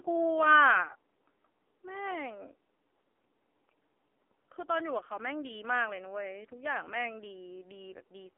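Throughout, the speech has been squeezed through the AMR narrowband mobile codec at a heavily damaging low rate, consistent with roughly 5.9 kbps. The audio is confined to a 300 Hz to 3.5 kHz telephone band with nothing above 3.7 kHz, leaving it muffled, buzzy and synthetic.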